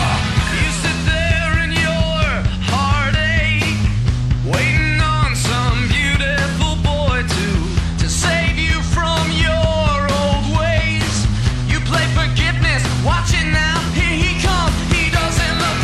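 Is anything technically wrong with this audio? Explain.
Yes. Throughout, a stage is driven about 2 dB past its ceiling, so around one percent of samples are cut flat by hard clipping, adding brief crackle on loud moments.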